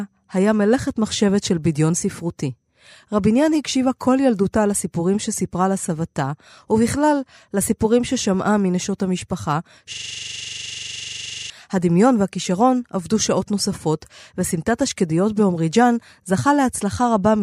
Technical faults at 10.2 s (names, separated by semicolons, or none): system hang loop